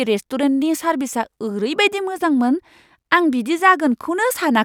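No technical faults can be heard anywhere in this speech recording. There is nothing to place on the timeline and nothing that needs a technical explanation.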